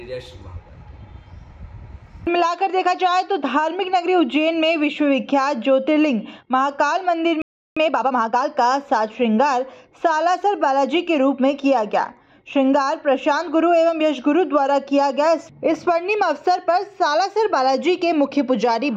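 At 7.42 s the sound just cuts out mid-flow and stays silent for about 0.35 s, until 7.77 s. That's a playback stall, most likely the player running dry of data or its thread getting blocked, so nothing reached the output until it recovered.

Right after, from 7.77 s to 8.45 s, you get time-compressed catch-up. The player chops out small slices and cross-fades the joins to burn off its backlog, running at about 1.5x speed. Pitch holds steady, but the audio sounds hurried.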